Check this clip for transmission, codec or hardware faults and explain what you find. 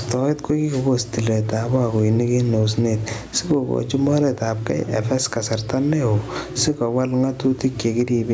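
There's one real fault here: gain pumping, running through the whole speech clip. The gain swings by roughly 15 dB, pulling down under each loud sound, leaving everything squashed. The likely cause is mic gain set far too high, with a fast limiter clamping down on each peak. The top end stopping at 8 kHz is just the call's normal microphone processing.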